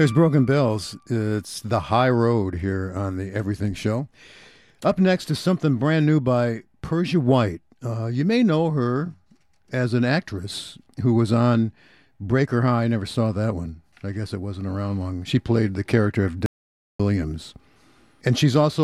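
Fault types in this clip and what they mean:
Audio dropout to silence: from 16.46 to 17.00 s the speech cuts out for 0.53 s into silence with no room tone, likely from input lost through disconnection, failed link or mute.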